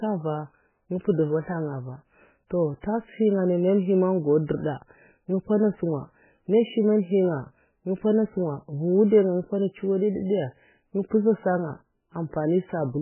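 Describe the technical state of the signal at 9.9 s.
At 9.9 s the speech carries MP3 compression, as it does throughout: nothing above 3 kHz, and a heavy watery swirl from weak lines dropping out frame to frame, likely from a very low bitrate near 8 kbps.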